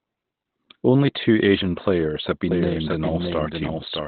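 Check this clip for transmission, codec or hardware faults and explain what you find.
Two faults are audible in this speech clip.

Opus compression, throughout: the encoder was likely in SILK speech mode at a low rate, about 12 kbps. It cuts everything above 4.3 kHz, leaving narrowband speech that sounds muffled and hoarse.

Doubled audio track, from 2.51 s after "players have" to the end: a second copy, likely from a slower path, trails by roughly 0.7 s at about 5 dB lower. It starts abruptly as a dry, distinct echo.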